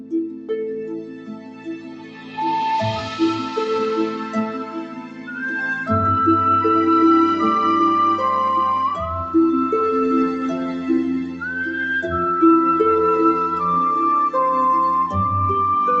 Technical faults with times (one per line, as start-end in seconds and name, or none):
0.00-16.00 noise suppressor applied to music or sounds
0.00-2.38 sound cut by the noise suppressor
4.09-5.40 sound cut by the noise suppressor
10.72-10.89 sound cut by the noise suppressor
11.24-11.43 sound cut by the noise suppressor